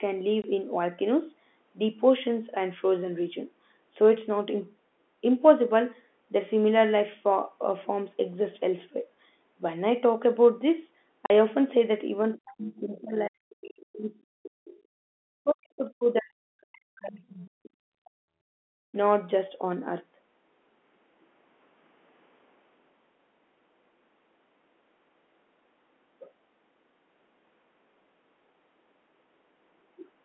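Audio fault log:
0.42–0.44 s and 11.26–11.30 s, packet loss filled with silence: the sound drops to dead silence for 20 ms, then 40 ms, with hard edges. Lost audio was replaced by nothing, and the gap lengths fit one and two 20 ms packets.
12.33–14.79 s and 15.27–18.46 s, speech suppressed in double talk: the speech dips, thins and breaks into pieces, sinking by as much as about 40 dB over roughly 2 s and 3 s in total. The likely cause is an echo canceller, confused by both sides talking at once, turning everything down.
13.18–13.27 s and 14.43–14.47 s, other side's voice leaking through: brief scraps of a second voice appear, about 20 dB and 25 dB below the main speech. These are likely loudspeaker echo that the canceller failed to remove from the microphone during the double talk.
18.75–18.92 s, background gated by the echo canceller: the room sound suddenly drops away for about 150 ms, falling by about 36 dB, and then returns. 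The canceller clamped the microphone hard while the loudspeaker played and released it afterwards.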